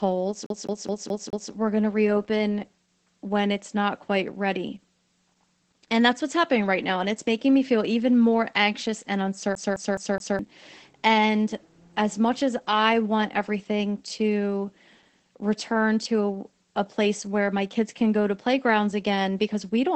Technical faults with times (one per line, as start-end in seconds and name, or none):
0.00-19.96 Opus voice compression
0.46-1.51 CD stuck on one turn
9.55-10.39 CD stuck on one turn